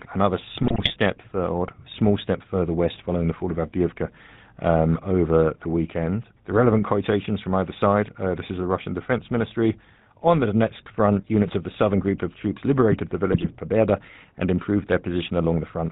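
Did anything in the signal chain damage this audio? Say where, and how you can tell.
Yes. At the codec stage, GSM full-rate coding runs throughout: a buzzy, gravelly roughness and nothing above 4 kHz, which fits 13 kbps pulse-excited vocal-tract modelling.

In the network stage, GSM bit errors appear from 0.62 to 0.93 s and 13.32 to 13.47 s. These squawks and pops come from corrupted filter, pitch and gain values.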